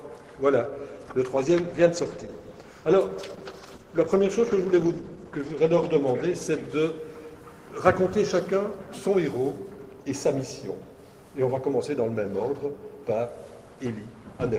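A call bitrate drop runs from 1.37 s to 7.09 s: the sound turns coarse and watery and loses its top end, which points to the encoder falling from about 32 kbps to roughly 13 kbps after the bandwidth estimate fell, staying at its lowest for about 4.4 s before recovering.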